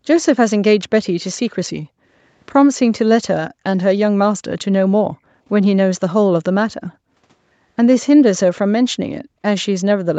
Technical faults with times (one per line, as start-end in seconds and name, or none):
1.79-2.15 background gated by the echo canceller
3.50-3.63 background gated by the echo canceller
3.77-3.82 echo leak
5.20-5.33 background gated by the echo canceller